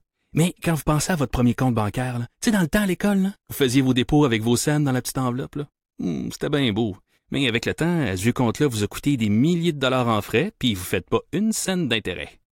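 A speech recording, with nothing technically wrong with it.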